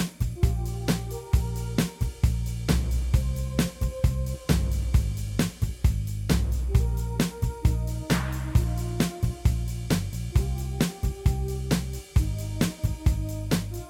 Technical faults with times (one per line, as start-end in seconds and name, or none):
none